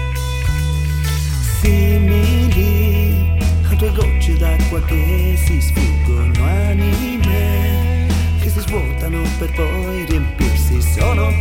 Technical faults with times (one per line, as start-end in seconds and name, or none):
none